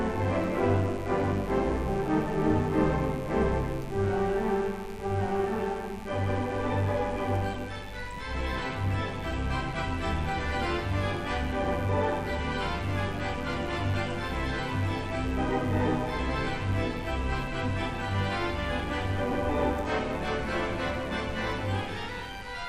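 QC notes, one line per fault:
throughout, mains buzz: a steady, raspy buzz sits under the whole sound, roughly 25 dB below it. Sharp switching spikes, twice per 50 Hz cycle, leak in through a dimmer, rectifier or unshielded path, spraying 50 Hz harmonics up into the kilohertz range.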